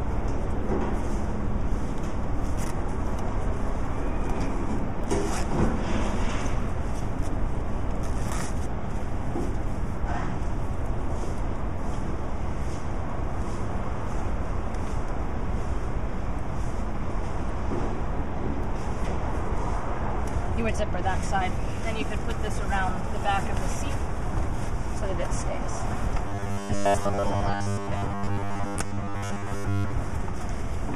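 The audio turns into a rigid, metallic buzz from 26.29 s to 29.93 s, a robotic sound from repeated short buffers. It is likely caused by new audio arriving too seldom, so the last short chunk is replayed to fill the gap while the real audio is skipped, here for most of the span. The repeats impose a fixed 100 Hz buzz, which fits a 10 ms buffer. On a spectrogram this shows as evenly spaced harmonics at multiples of 100 Hz, and the waveform shows identical 10 ms cycles.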